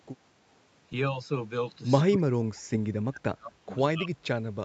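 From 2.09 to 2.62 s, 3.09 to 3.71 s and 3.94 to 4.27 s the speech dips by around 30 to 35 dB and breaks up in pieces, the likely result of speech suppressed in double talk, where the echo canceller mistook the talker for returning echo.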